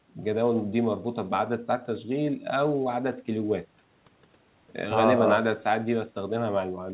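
No technical faults are audible.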